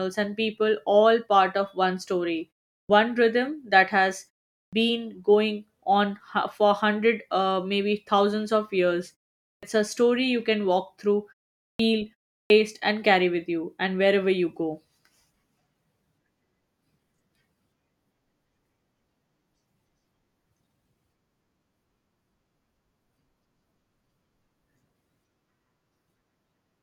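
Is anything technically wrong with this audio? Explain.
Yes: clipped start after a pause at 2.81, 4.65, 9.54, 11.72 and 12.42 s. After pauses of 0.35 to 0.47 s, the output wakes late and swallows 74 to 87 ms, so speech begins abruptly. Waveforms jump from flat silence straight into speech, and spectrograms lack the onsets.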